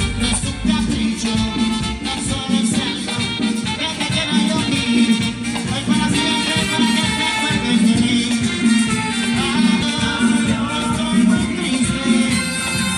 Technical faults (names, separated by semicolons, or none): compressed frames skipped